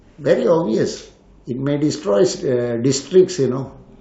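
From start to finish the speech sounds dull and gurgly, with a granular grit on it. That's likely MP2 compression starved of bits, which fits a low rate around 80 kbps: upper sub-bands keep dropping out and the surviving ones are coarsely quantised.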